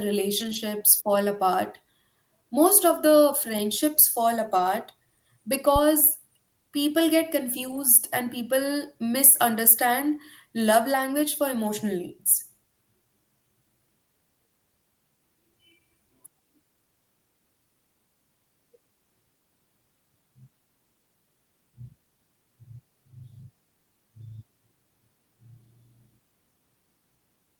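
Brief rough, noisier patches at 0.39–0.57 s, 4.55–4.61 s after "of the friendships fall", and 7.67–7.77 s after "people get" are lost packets rebuilt from error correction, played from low-bitrate backup copies.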